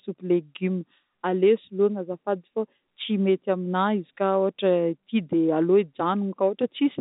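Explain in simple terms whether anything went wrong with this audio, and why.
Nothing went wrong with this audio; it sounds like an ordinary landline phone call, which is exactly how this kind of recording is meant to sound.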